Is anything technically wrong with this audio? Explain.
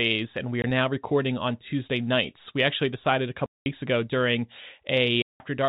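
Yes. The speech drops out abruptly three times: a short gap from 0.62 to 0.64 s (20 ms), a longer one from 3.46 to 3.66 s (200 ms), and another from 5.22 to 5.40 s (180 ms). Each hole starts and stops with hard edges. This is packet loss filled with silence: packets never reached the receiver, so it played nothing in their place. Every gap is a multiple of 20 ms, which points to 20 ms packets. The band-limited telephone sound of the G.711 coding is simply how that path sounds.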